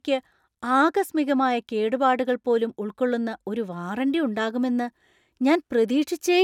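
From the start to 3.87 s there's channel delay (comb filtering): one side lags roughly a sample, so the mono sum's first notch lands near 20 kHz, leaving the speech slightly dull up top.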